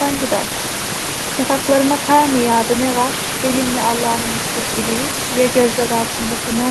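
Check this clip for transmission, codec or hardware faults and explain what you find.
No transmission, codec or hardware faults turn up anywhere in the speech. The top end stops around 12 kHz, as expected from a call codec such as Opus at a modest bitrate, and the room noise sits about 7 dB below the voice.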